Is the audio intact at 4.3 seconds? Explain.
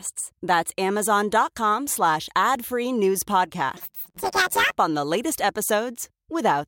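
No. Planar audio read as interleaved runs from 3.77 to 4.77 s, ending just before "on the latest". Each 10.9 ms block stores all left samples and then all right samples, but playback reads them as alternating pairs, so every block plays twice at double speed, left then right, while the overall pace holds. With blocks this short, the speech turns into a robotic buzz at the block rate of about 92 Hz, with no clear octave shift.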